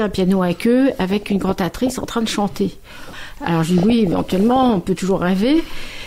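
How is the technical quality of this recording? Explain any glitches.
The quality is compromised by two bursts of DAB burbling, from 1.10 to 2.09 s and from 3.78 to 4.78 s. Corrupted sub-band samples and scale factors, consistent with a bit error rate of about one percent, produce short blips of noise and jumps in level in single sub-bands. On a spectrogram, these appear as isolated bands flickering on and off frame by frame.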